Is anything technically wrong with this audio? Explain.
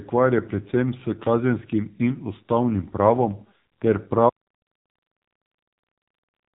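Yes. Throughout the clip, the speech carries heavy AMR narrowband mobile codec damage. The codec rebuilds the voice from a vocal-tract model excited by a few pulses per short subframe, and the coarseness here fits a very low bitrate near 6 kbps. Voices come out buzzy, thin and synthetic. Nothing passes above 3.8 kHz, so a spectrogram shows a flat ceiling with empty space above it, and the voiced harmonics below look smeared.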